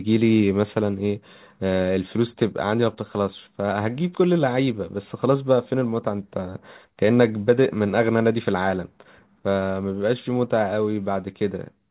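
Throughout the clip there is clock drift between sender and receiver: the sender's clock runs fast, around 5 percent ahead, so the receiver's jitter buffer keeps filling faster than playback can empty it, and the speech carries small, unevenly spaced timing hiccups rather than a steady flow.

From 0.04 s to 11.9 s, repeated timing corrections follow from that: the receiver keeps discarding short slices of audio to catch up, all in the same direction, with playback running at 105 percent of normal speed. Each cut is slight, heard as a faint skip or a slightly hurried, uneven tempo. The narrow 4 kHz band of the G.711 call path sits under these skips.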